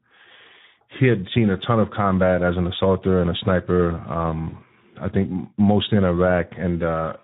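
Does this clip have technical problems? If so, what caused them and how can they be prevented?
Yes. The speech is coded with the Speex codec throughout, and the damage is plainly audible. The hoarse, noisy texture fits a setting around 11 kbps, where too few bits remain to code the excitation cleanly. Prevent this with a higher Speex quality setting or a newer codec such as Opus.

VoIP packet loss concealed by the speech codec occurs from 4.49 to 4.58 s. The decoder extended its last pitch and filter into a brief fade, consistent with a single lost 20 ms frame. The effect persists until about 4.58 s. Prevent it with forward error correction, redundant packets or a more stable network path.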